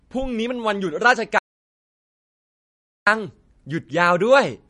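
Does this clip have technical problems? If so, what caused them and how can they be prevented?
Yes. Throughout the speech there's clear MP3 compression: nothing above 10.6 kHz, plus a watery, swirly texture on the sibilants as weak frequency lines flicker on and off. That points to an encoder likely starved of bits, fitting something around 40 kbps. Encoding at a higher bitrate would avoid it.

From 1.39 to 3.07 s there's an audio dropout to silence. The sound cuts out for about 1.7 s into silence, with no room tone at all, which likely means the input was lost while recording continued. Check connections and mute states before and during recording.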